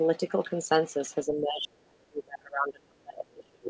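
From 1.23 s to the end, the speech is pushed down hard, by about 35 dB at its deepest. This is speech suppressed in double talk. The likely cause is an echo canceller muting the near talker while both sides spoke. The band stops at 8 kHz throughout.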